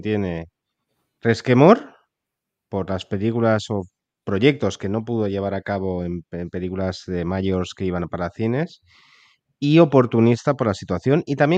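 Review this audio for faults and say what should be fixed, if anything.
Nothing in this speech recording needs fixing. No faults turn up anywhere in it, so there is nothing to prevent.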